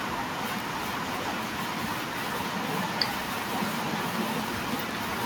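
A speech recording carrying a train of clicks from 3.26 to 5.23 s: about thirty sharp, evenly spaced ticks at 12.3 per second, standing well above the speech. The likely cause is electrical interference or a faltering interface. Spectrogram: regular thin vertical broadband lines. Waveform: matching narrow spikes.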